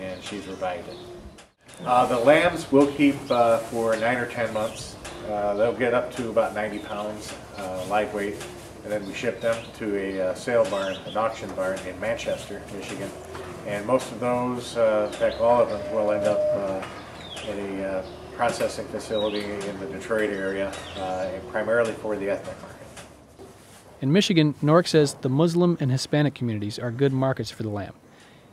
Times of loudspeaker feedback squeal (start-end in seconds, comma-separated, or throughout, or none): 15.07-16.68